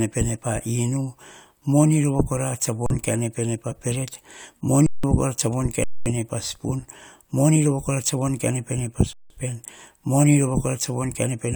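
Speech that drops into dead flat silence four times: 2.86–2.90 s before "kaene pene pa peret", 4.86–5.04 s before "kora tsa von", 5.84–6.06 s before "pa spon moni rova", and 9.13–9.30 s. This is an underrun with held sample. The output buffer emptied, the converter froze on its last value, and live audio was lost during each gap. The 171 ms gaps fit an 8192-sample buffer.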